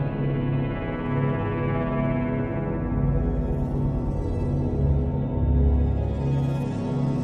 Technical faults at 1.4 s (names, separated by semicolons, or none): none